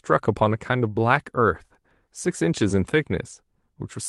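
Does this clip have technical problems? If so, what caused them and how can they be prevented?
No, there are no technical faults in this speech clip. It has passed through a WebRTC call path, and its top end stops at about 12 kHz, which fits an Opus call codec running at around 32 kbps.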